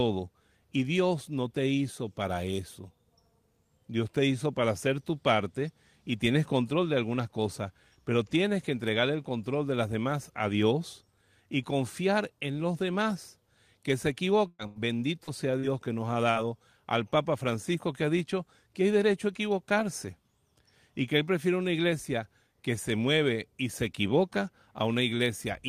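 A speech recording with a cluster of network damage packed into about two seconds. First come two bursts of packet loss, at 14.47 to 14.62 s and again at 14.67 to 14.79 s. In the first, roughly 120 ms of audio never arrived. The receiver papered over it by stretching the last sound for about 114 ms and fading it down, then left about 20 ms of dead silence before the audio picked up further along. The second burst lost 80 ms, covered by an 88 ms held-and-fading fill. Each one reads as a brief buzzy or hissy smear followed by a jump, with the bit in between just gone. Right after that, three short concealed packet losses land at 15.24 to 15.30 s, 15.59 to 15.66 s and 16.31 to 16.38 s, each dropping about 40 ms. Here the decoder bridged the gap with 37 to 44 ms of synthesised continuation, pitch-based or noise-like depending on what came before, and blended back into the real signal. These come across as quick little wobbles or smears, and a short consonant can get swallowed.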